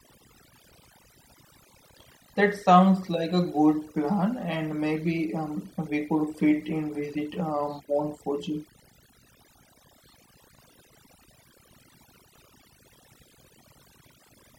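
Right from the start and all the way through, this speech has overdone noise removal. The denoiser was pushed too hard, so bands near its noise estimate get switched off along with softer parts of the voice. You hear near-silent gaps with twinkly specks.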